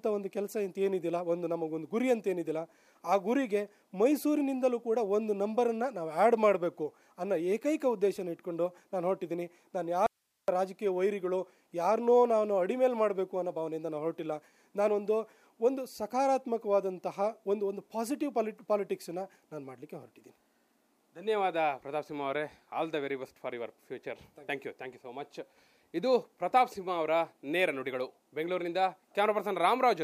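An audio dropout to a faint residue runs from 10.06 s to 10.48 s. The sound cuts off abruptly mid-flow for about 0.42 s, and the gap holds only a bed of hiss, roughly 50 dB below the signal, before the audio snaps straight back. The likely cause is a brief loss of the wanted signal upstream while the rest of the chain stayed live, so its own noise floor carried through the break.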